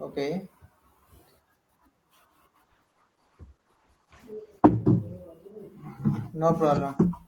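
A call bitrate drop hits this speech clip from 2.65 to 5.65 s. The call's bandwidth estimate fell, forcing the encoder onto a much smaller bit budget, which points to a drop from about 32 kbps to about 11 kbps. The coding coarsens and the audio band narrows from 20 kHz to 12 kHz, so the speech turns duller and rougher. It is at its worst for about 1.9 s before recovering.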